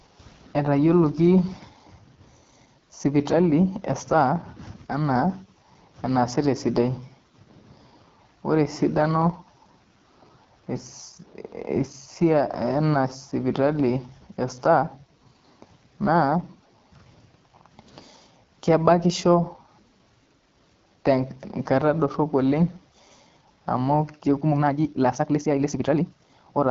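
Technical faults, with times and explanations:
Throughout, AMR wideband (HD Voice) codec: the speech sounds rough and raspy with a gritty edge, and nothing is heard above 7 kHz. The codec models speech up to 6.4 kHz and fills the top with shaped noise. The roughness fits a low rate near 8.85 kbit/s.
24.39 to 26.70 s, time-stretched section: the closing stretch suddenly rushes at 1.85 times the pace, sounding rushed while the pitch stays put. Software likely squeezed this part to fit a length, dropping short slices of audio to preserve pitch.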